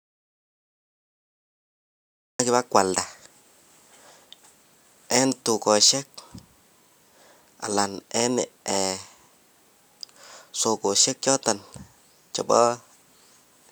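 The speech opens in dead digital silence, with no room tone, until it cuts in at 2.39 s: an audio dropout to silence, likely from lost input.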